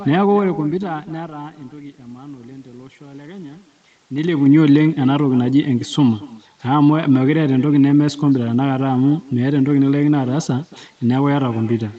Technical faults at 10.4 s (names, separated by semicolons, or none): echo with no canceller